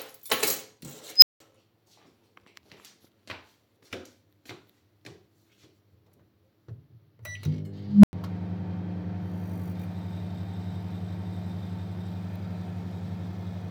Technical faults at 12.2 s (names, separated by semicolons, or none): none